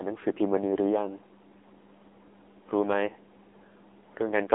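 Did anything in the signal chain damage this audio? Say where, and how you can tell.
Yes, at the codec stage, for the whole clip. The speech sounds buzzy and synthetic, squeezed into a narrow phone band running from about 250 Hz to 3.6 kHz, with nothing at all above 3.7 kHz. This is heavy AMR narrowband mobile codec damage. The 8 kHz sampling removes all the upper band, and the low-rate vocal-tract model rebuilds the speech from a few pulses per subframe, which points to a low mode around 6.7 kbps.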